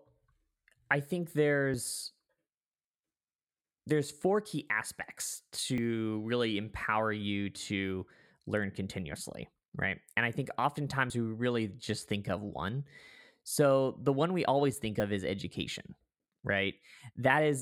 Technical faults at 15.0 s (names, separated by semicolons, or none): dropped buffer (overrun)